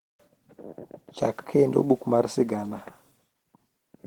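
Opus voice compression runs through the whole clip. The speech sounds hoarse and slightly robotic, from coarsely coded excitation. Hybrid mode codes the band below 8 kHz with SILK and the top with CELT. Content reaches about 20.1 kHz. The damage suggests roughly 16 kbps.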